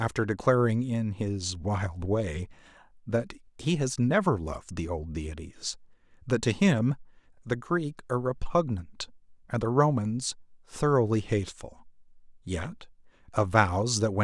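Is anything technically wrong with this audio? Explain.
No, nothing technically wrong turns up here, so there's no fault to walk through in this bit of speech.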